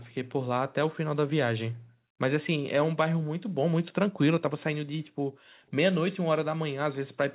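Speech with the background gated by the echo canceller at 1.71 to 2.2 s, 3.39 to 3.57 s and 5.0 to 5.71 s, where the room sound falls by about 40 dB while the loudspeaker plays. Unlike packet dropouts, the gaps track far-end playback and recover as the canceller releases.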